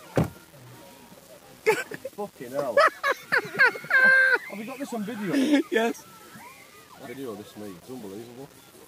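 Throughout, a grainy distortion about 30 dB below the signal follows the sound and turns quiet passages gritty. This is low bit depth without dither, likely rounding to around 7 bits. At 1.79 s, 5.32 s and 7.04 s, compressed frames are skipped. The audio jumps ahead by roughly half a second, 0.3 s and 0.2 s, in multiples of a 46.4 ms frame.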